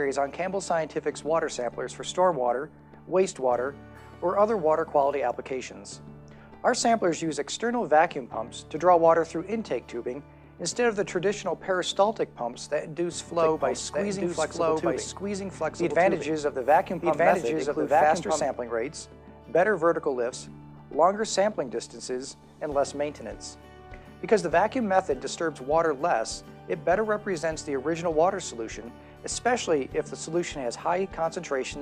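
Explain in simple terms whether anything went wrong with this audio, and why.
Between 13.39 and 18.45 s there's a doubled audio track: the sound plays twice, the second copy trailing about a second and a half behind at roughly the same loudness, cutting in and out abruptly. That's likely from a second, slower capture path or a misaligned edit.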